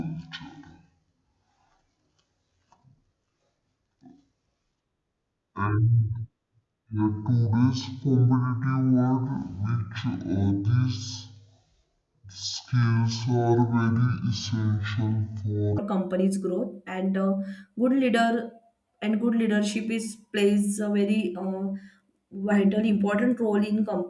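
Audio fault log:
0.0–15.78 s: wrong sample rate. The speech runs at half speed and drops a full octave (12 semitones), sounding deep and dragged out. That fits a 48 kHz recording being played back at 24 kHz with no conversion, so pitch and tempo fall together.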